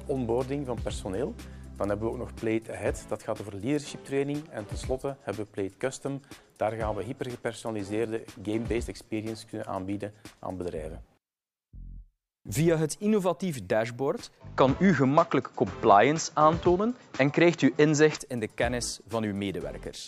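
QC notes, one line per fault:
14.41–18.18 s, input switched to a poorer device: the recording likely jumped to a different, lower-grade input, then back. Over that span nothing is present above 7.6 kHz, so the sound turns duller and boxier, its tone changes, its level shifts by around 5 dB, and a new background noise floor appears roughly 35 dB below the signal. There is no silence at either switch, so the change in character is abrupt and seamless.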